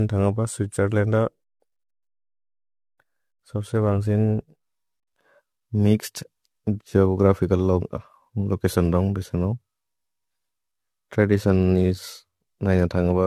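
From start to end, the speech carries generation loss. It sounds swirly, smeared and hollow. Attacks blur. Nothing remains above 14.1 kHz. The likely cause is around five rounds of lossy re-encoding, fitting AAC-LC at 64 kbit/s, with each pass adding fresh quantisation noise.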